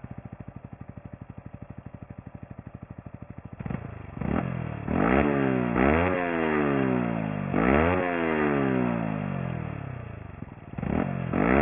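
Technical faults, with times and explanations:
Throughout, aliasing: the audio sounds like it was taken down to a much lower sample rate, which fits about 6 kHz, without an anti-aliasing filter first. Anything above the new 3 kHz limit didn't get removed. It folded back below 3 kHz at wrong, unrelated frequencies, roughly 15 dB under the main signal. That's why the top end has that gritty, metallic edge and the spectrum runs hard right up to the band edge.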